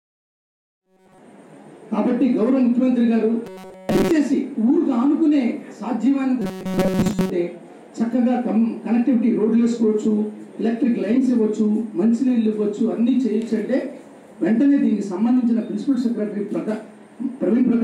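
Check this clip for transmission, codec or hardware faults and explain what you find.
One fault recurs three times. Robotic sound from repeated short buffers occurs at 0.70–1.18 s, 3.46–4.11 s and 6.42–7.30 s. This is likely due to audio arriving too seldom. A roughly 5.3 ms slice then loops, imposing a rigid 188 Hz metallic buzz over most to all of each span. The gentle fade-in ending at 1.41 s is an ordinary edit, not a fault.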